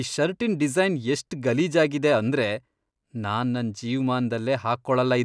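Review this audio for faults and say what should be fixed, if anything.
Nothing needs fixing here: the speech has no dropouts, clicks, distortion or other technical problems to be heard.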